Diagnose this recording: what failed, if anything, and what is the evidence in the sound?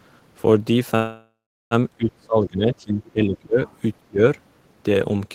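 From 0.95 to 1.74 s the sound stretches into a fading buzz or hiss, then about 0.37 s of silence, and resumes intact. This is a network-stage call audio freeze, likely from an emptied jitter buffer.

The speech dips by up to about 25 dB from 1.97 to 3.60 s and again from 4.02 to 4.22 s. This is speech suppressed in double talk at the call-processing stage, likely the echo canceller turning down both this talker and the loudspeaker echo.

A faint second voice, roughly 30 dB below the speech, slips through from 3.67 to 3.76 s. This is the other side's voice leaking through, likely from loudspeaker echo the canceller left behind.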